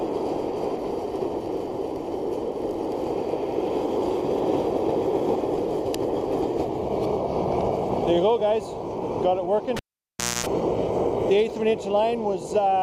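At about 9.77 s there's a clear case of a cable pulled and plugged in while live. You get a sharp pop as the connection breaks, then the sound drops to near silence for roughly 0.65 s. While only the tip touches, before the ground sleeve seats, about 0.25 s of 60 Hz mains buzz leaks through. A second pop marks the sound returning around 10.46 s.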